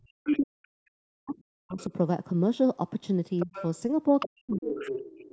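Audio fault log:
0.00–1.92 s, 3.44–3.53 s and 4.26–4.88 s: speech suppressed in double talk. The talker's level collapses in patches while the far end is also active, falling by up to about 40 dB at the worst points in the first and last stretches and by about 30 dB in the brief 3.44 s dip. Roughly one and a half seconds of the opening is affected. The likely cause is an echo canceller that could not tell the near talker from loudspeaker echo and attenuated everything.
0.26–0.38 s, 1.79–1.85 s, 3.39–3.69 s, 4.19–4.28 s and 4.75–5.32 s: other side's voice leaking through. Short fragments of a second voice sit under the talker, faint at first (about 20 to 25 dB down) and growing to about 15 dB down at 3.39 s and about 10 dB down from 4.19 s to the end. The likely cause is residual far-end audio from the device's loudspeaker that the echo canceller left in the microphone signal. The audio is band-limited to 8 kHz by the call processing.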